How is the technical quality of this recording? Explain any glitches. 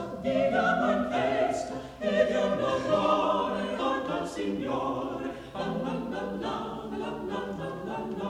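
Nothing to flag here: no glitches turn up anywhere in the recording, so there's nothing that needs explaining.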